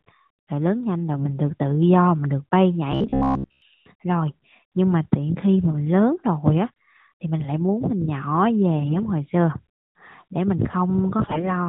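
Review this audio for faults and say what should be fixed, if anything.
AMR bit errors occur at 1.16 to 1.34 s, 8.80 to 9.00 s and 11.22 to 11.46 s. The speech keeps its pitch and level but turns hoarse and gargly. Flipped low-priority bits in the narrowband AMR frames misplace excitation pulses and skew the gain and spectral values. The error density is a few percent in the first two bursts and closer to a tenth in the last. Stronger channel coding or better radio conditions would prevent it.

Robotic sound from repeated short buffers runs from 2.92 to 3.62 s as a rigid metallic buzz at 66.8 Hz. Its likely cause is audio arriving too seldom, so the player loops a segment of about 15 ms and skips most of the real signal. Larger playback buffering or steadier audio delivery would prevent it.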